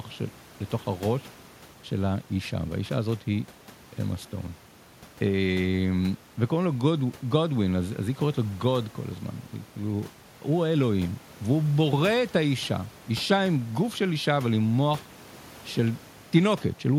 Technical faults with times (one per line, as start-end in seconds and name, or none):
none